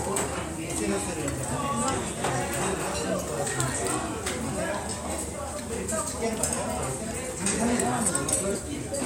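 Nothing stood out as a technical fault when listening to this recording of sounds.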